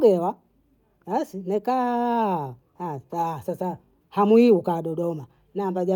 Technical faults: none

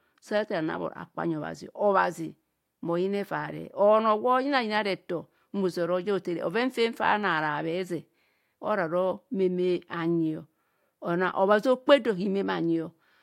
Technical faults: none

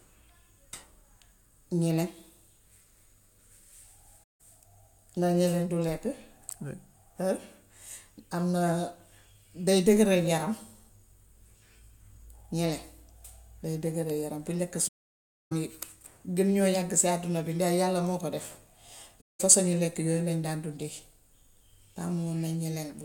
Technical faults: AAC frame loss with muting

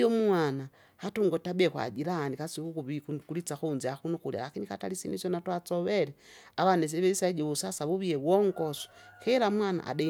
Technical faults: none

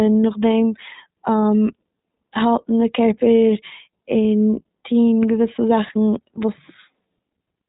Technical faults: iLBC codec

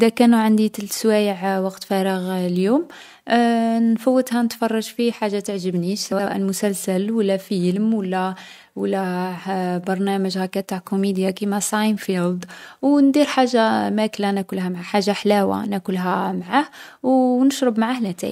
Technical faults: frames out of order

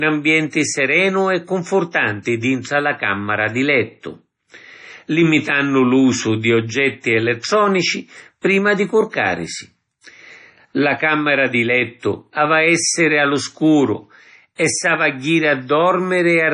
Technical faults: MP3 compression

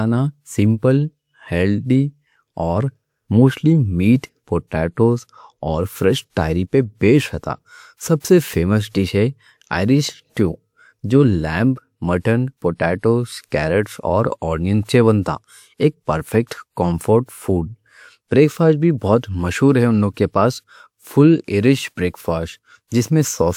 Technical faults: pre-echo

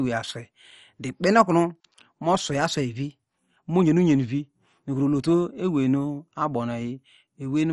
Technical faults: MP2 compression

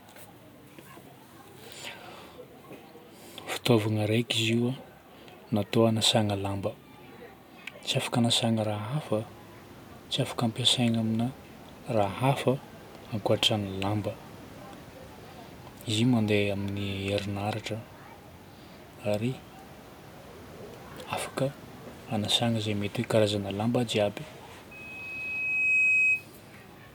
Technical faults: loudspeaker feedback squeal

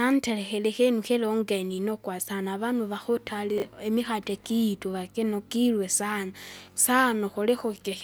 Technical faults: chunks out of order

